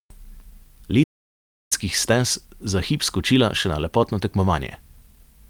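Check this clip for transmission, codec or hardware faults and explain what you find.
One fault stands out in the speech: a playback stall from 1.03 s to 1.72 s. The speech cuts off mid-flow and the output goes completely silent for about 0.67 s before sound returns. The likely cause is the player running short of buffered data, or its playback thread being blocked, so nothing reached the output until it recovered. It sounds like an abrupt dead gap rather than a fade or a natural pause.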